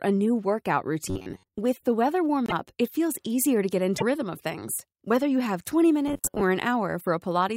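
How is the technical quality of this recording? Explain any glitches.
The recording is marred by two kinds of glitch, each appearing twice.

From 1.10 to 1.59 s and from 6.08 to 6.42 s, the speech becomes a rigid, metallic buzz at 93.8 Hz. This is robotic sound from repeated short buffers. New audio likely arrived too seldom, so a segment of about 10.7 ms was looped while real audio was skipped. The repeats cover most of the first stretch and roughly half of the second.

At 2.46 to 2.52 s and 3.97 to 4.03 s, the audio jumps ahead, pointing to a broken MP3 bit reservoir. Frames of 24 ms were likely cut out, and the next frame then read its borrowed bits from unrelated data.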